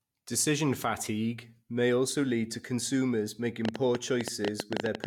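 From 3.65 s to 5.05 s, just after "also lead to consumers", a train of clicks runs about 10.1 per second at uneven spacing, around fifteen near-identical pops standing roughly 20 dB above the speech, likely interference or a faulty connection. Their matching shape separates them from random vinyl-style crackle.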